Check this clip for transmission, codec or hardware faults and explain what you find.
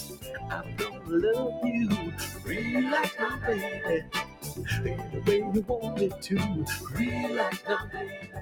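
A speech-tuned processing stage is at fault here, not the transmission link or hardware.

Noise suppressor applied to music or sounds, throughout: a suppressor built for speech treats steady, sustained material as noise and pulls it down. The level swings by around 10 dB, so held sound pumps and thins while onsets mostly pass through.

Sound cut by the noise suppressor, at 0.0–1.1 s, 2.3–2.49 s, 4.01–4.45 s and 8.14–8.37 s: here the suppressor misjudges sustained or decaying sound as noise and clamps it, with drops of about 9, 7, 10 and 9 dB. Tails sink abruptly, and the sound briefly thins out.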